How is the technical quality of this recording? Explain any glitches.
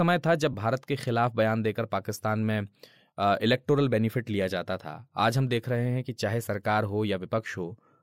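The recording has one glitch, a lost LE Audio frame at 0.53 s. About 10 ms of Bluetooth data went missing, which fits a single dropped frame. The decoder filled the gap by repeating the previous spectrum with scrambled phase, so the speech briefly turns into a short, noisy smear.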